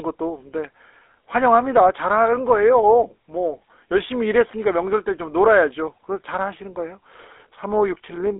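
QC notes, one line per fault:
Throughout, GSM full-rate codec: the sound is confined to a telephone band of roughly 300 Hz to 3.5 kHz, with nothing above 3.8 kHz, and carries a plainly audible buzzy, gravelly roughness, which points to a 13 kbps full-rate coder. The roughness comes from the coder rebuilding the voice by driving a vocal-tract model with a sparse, regular pulse train. A plain band-limiting filter would sound only muffled, without that grainy buzz.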